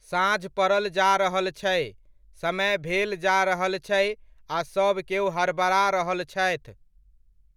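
No technical faults can be heard anywhere in the speech recording, and the signal stays steady and continuous throughout.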